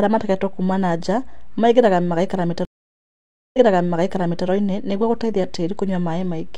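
At 2.65 s the speech drops out completely for about 0.89 s. That's a stream reconnect: the connection broke, the player sat silent, then reconnected and spun up a fresh decoder partway through the stream. When sound returns, it picks up about 0.93 s earlier than where it cut off, so you hear a stretch of speech over again, the server having resent a burst of audio. The whole episode is over by about 4.47 s.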